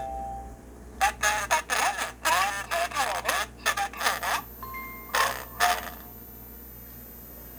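A switching supply whistle enters at 3.97 s and runs to the end. A nearby switching power supply is running in an audible burst mode or beating with another supply and leaking into the chain. It sounds like a thin, high whistle, drifting between about 13.8 and 14.1 kHz, roughly 20 dB below the sound.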